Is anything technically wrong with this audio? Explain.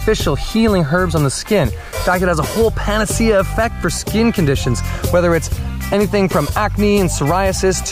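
No, nothing technically wrong can be heard in this audio. There is no fault to point to anywhere in it.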